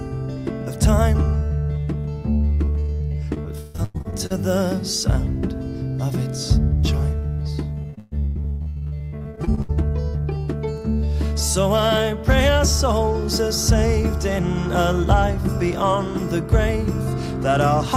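From 2.65 to 4.32 s, repeated packet loss gives a robotic sound. Thirteen short holes break the audio, the longest 136 ms. Each is patched by stretching the last sound, so about a third of the stretch is filled-in copy. It sounds choppy. The same fault returns from 7.82 to 9.71 s, and it is worse there. There are 22 holes, the longest 124 ms, and about half the span is concealed.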